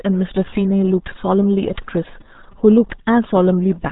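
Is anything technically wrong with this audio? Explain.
Yes. Throughout, it's the RealAudio 14.4 codec at work: heavy damage consistent with an 8 kbit/s dial-up speech codec. Everything above about 3.8 kHz is gone, so the speech sounds muffled and dull, with a gargly, bubbling texture from squeezing it into so few bits.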